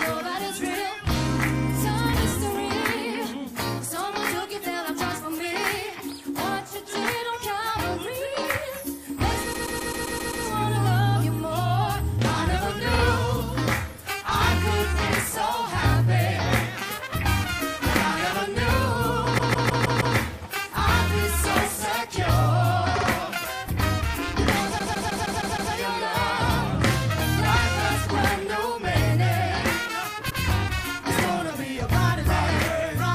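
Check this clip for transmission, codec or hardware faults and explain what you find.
The clip has one fault type: repeated frames, six times. The encoded stream carried runs of compressed frames more than once, so the decoder played the same stretch again in place. Blocks of about 130.6 ms repeat seven extra times from 9.52 to 10.44 s, 52.2 ms once at 12.95 s, 156.7 ms five times from 19.37 to 20.16 s, 52.2 ms twice at 22.95 s, 156.7 ms six times from 24.78 to 25.72 s, and 104.5 ms once at 30.29 s. Block lengths point to frames of about 26 ms. Each is heard as a stutter, and together they add about 2.9 s.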